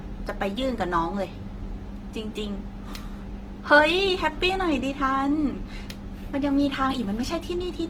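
Throughout, the speech sounds grainy and rough despite content reaching 20.2 kHz. Likely Opus compression, its music mode filling starved bands, which fits about 16 kbps.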